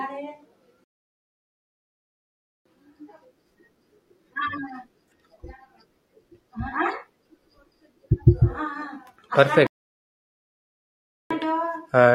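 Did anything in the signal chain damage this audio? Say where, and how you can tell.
Yes, two rebuffering stalls at playback, 0.84–2.66 s and 9.67–11.31 s. The player ran dry, went silent, then resumed exactly where the speech stopped.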